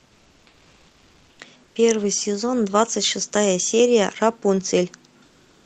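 From 0.00 to 1.39 s, 1.63 to 1.75 s and 5.25 to 5.66 s, comfort noise replaces the background, likely from Opus discontinuous transmission: a smooth, featureless hiss about 2 to 3 dB quieter, showing as flat, uniform spectrogram texture and steady waveform floor.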